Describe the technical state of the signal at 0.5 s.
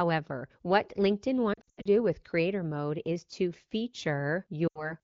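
At 0.5 s the speech is intact, with no fault audible at that moment.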